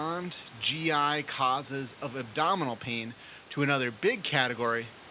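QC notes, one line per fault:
No faults found: room noise sits about 24 dB below the speech, and the call path cuts everything above 4 kHz, which fits a 64 kbps G.711 A-law link.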